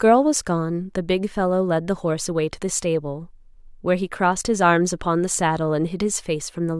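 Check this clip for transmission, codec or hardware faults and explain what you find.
No transmission, codec or hardware faults are audible anywhere in this speech recording.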